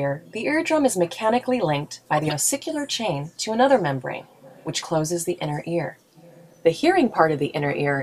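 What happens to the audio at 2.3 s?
A brief garbled burst from 2.17 to 2.37 s: a corrupt frame decoded, where a run of several damaged compressed frames was played anyway, putting stray energy at wrong frequencies.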